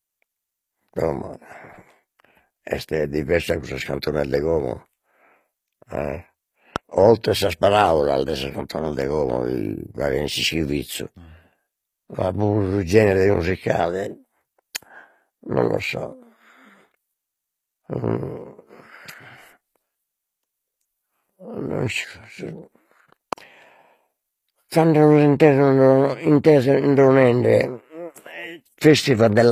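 A speech recording with compression damage that is plainly audible throughout. The treble sounds rebuilt rather than captured, and nothing reaches above 15.5 kHz. The likely cause is HE-AAC compression, which fits a low bitrate of about 24 kbps. It codes only the lower band and fills the top by copying lower bands upward, so harmonics there don't line up. Two loud pops cut through the speech, at 6.76 to 6.78 s and again at 23.33 to 23.35 s. Each is a single sharp pop, about 15 dB above the speech, and the speech carries on underneath. A sudden voltage step or pulse entering the signal, from a plug, switch, static or driver glitch, is the likely cause.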